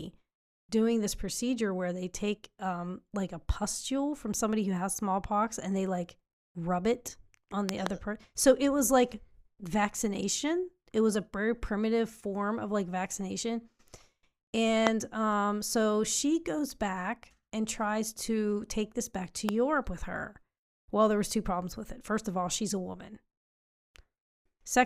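Loud pops hit three times. Two come in quick succession at 7.69 to 7.89 s. Single pops follow at 14.87 to 14.89 s and 19.49 to 19.51 s. Each jumps roughly 20 to 25 dB over the speech. A voltage spike is the likely cause.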